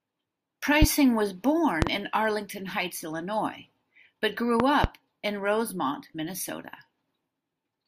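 At 0.82 to 0.86 s a single loud pop jumps out of the speech, followed by a double pop at 1.82 to 1.90 s and another pair spread across 4.60 to 4.88 s. Each is a sharp thump about 20 dB above the speech, which carries on underneath. The likely cause is a brief electrical pulse, such as a connector or switch glitch. On the waveform each pop is a tall, narrow spike. On a spectrogram each is a thin vertical broadband stripe.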